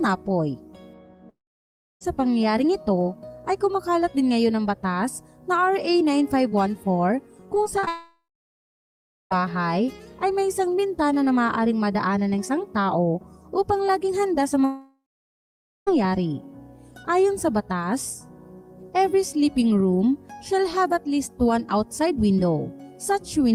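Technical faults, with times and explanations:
1.29–2.03 s, 7.89–9.33 s and 14.65–15.89 s, long network dropout: the stream likely stopped arriving for 0.72 s, 1.42 s and 1.22 s. Each time, the receiver stretches the last sound into a brief fading buzz, then leaves silence, and audio resumes with that stretch missing.
7.55–7.89 s, repeated packet loss (robotic sound): four separate losses in a third of a second, the longest 38 ms, are each patched by repeating the preceding sound. About a quarter of this span is patched rather than real, so it sounds choppy with pieces missing.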